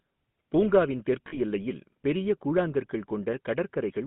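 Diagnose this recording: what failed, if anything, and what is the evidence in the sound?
A buzzy, gravelly roughness sits on the voice for the whole clip, and the sound is confined to a band from about 150 Hz to 3.6 kHz, with nothing above it. The fault is at the codec stage: a GSM full-rate codec, consistent with the 13 kbps full-rate mode, rebuilds the voice from a vocal-tract model fed by a coarsely sampled pulse excitation. That thinned excitation causes the plainly audible grit.

At 1.28 s the voice briefly locks into a rough, metallic ring before normal sound returns at 1.37 s. These are lost GSM frames, a network or transmission fault. The decoder filled the 40 ms gap, consistent with two missing 20 ms frames, by reusing the parameters of the last good frame. The gap was too short for that held tone to fade fully to silence.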